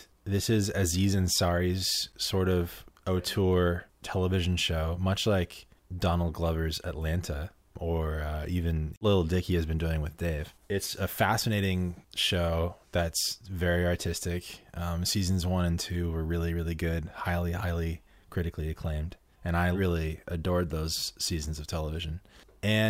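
At 2.12 s, just before "sort of auteur television", a block of digital silence drops out 8 ms of speech. The abrupt cut and return make a sharp tick.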